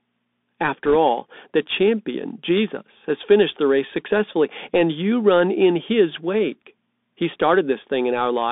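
From the start, the speech runs through a Bluetooth CVSD headset codec. The band tops out near 3.6 kHz, and there's a grainy hiss and scratchy s sounds, which fits a 64 kbps CVSD stream. Then, from 0.85 to 0.96 s, bit errors on the Bluetooth voice link, around a couple of percent of bits flipped, add a brief rushing crackle with no hard clicks.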